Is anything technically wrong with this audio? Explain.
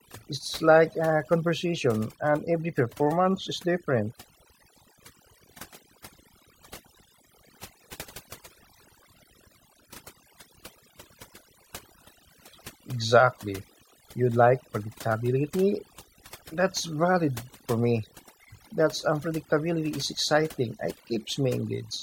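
Yes. The speech suffers from overdone noise removal throughout. A noise reducer set too strong cuts individual frequency bands whenever they sit near its noise estimate. Quiet voice detail goes too. Pauses become near silence with twinkling specks.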